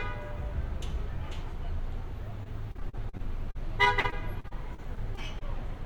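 The everyday sound turns choppy from 2.43 s to 5.61 s, with small pieces dropping out in quick succession and each hole bridged. This is repeated packet loss (robotic sound). Data arrived late or not at all roughly twenty times across the stretch, and each gap, the longest lasting 40 ms, was papered over by extending the preceding sound. About 460 ms went missing in total, with 452 ms of that concealed, roughly 14 percent of the affected span.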